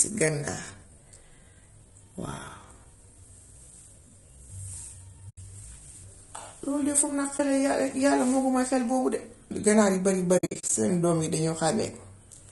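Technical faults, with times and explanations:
throughout, low-delay AAC compression: The sound is rough and grainy, with a hiss filling the gaps between the pitch harmonics and a top band that sounds thin and synthetic. This is likely AAC-ELD, the low-delay coder used for video calls, at a rate that fits around 32 kbps. At this bitrate it runs short of bits, so noise and a rebuilt high band stand in for real detail.
0.00 to 5.98 s, time-stretched section: The opening runs slow, at about 0.71 times normal pace, yet the pitch stays where it should. The result drags, and the pace jumps back to normal at 5.98 s. This is likely software lengthening the audio to fit a target duration. It keeps the pitch by repeating short slices of the waveform.
5.29 to 5.38 s, 7.37 to 7.40 s and 10.37 to 10.70 s, AAC frame loss with muting: Each is a soft-edged drop-out. The first hole is 80 ms long and the second about 20 ms. 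The third is a flutter of brief holes spread over roughly 320 ms, 200 ms of sound gone in all, the longest gap about 70 ms. Coded frames went missing and the decoder put silence in their place. The overlapping windows then fade the sound out and back in over about a frame, which rounds the edges.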